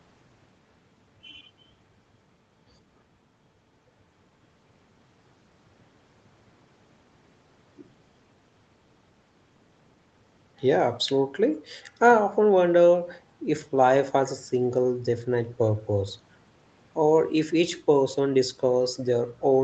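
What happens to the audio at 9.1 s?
At 9.1 s the speech carries on intact, with nothing wrong in it beyond the ordinary call microphone processing, which trims the lowest bass and leaves nothing above 8 kHz.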